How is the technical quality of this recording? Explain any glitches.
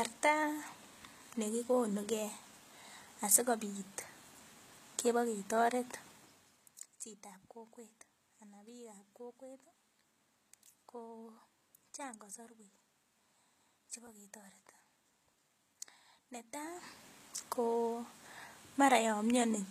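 Plainly audible codec damage runs through the whole speech recording. HE-AAC compression, throughout: s sounds turn gritty and metallic because the treble is likely rebuilt from copied lower bands, which fits a bitrate around 20 kbps.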